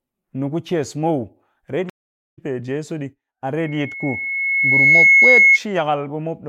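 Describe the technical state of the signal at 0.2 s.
At 0.2 s the speech signal is intact, with no audible fault at that moment.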